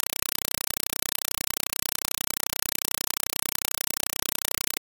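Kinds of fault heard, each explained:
Compressed stream played as audio: undecoded AC-3 data replaces the speech with loud chattering static, and the waveform shows 4 ms noise bursts 31.25 times a second with flat zero padding between.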